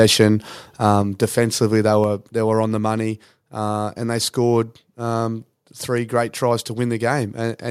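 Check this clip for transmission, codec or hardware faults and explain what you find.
Two kinds of fault are audible: one burst of clipping and two sudden level drops.

Microphone overload at 0.86–0.90 s: the input likely ran about 1 dB past the converter's limit, squaring off roughly one percent of samples. The waveform shows flattened tops; the spectrogram shows brief broadband splatter.

Microphone volume stepped down at 1.02 s (about 4 dB) and 2.04 s (about 2 dB), likely the call software reacting to the overload. Voice and background fall together; the waveform envelope shrinks in a step.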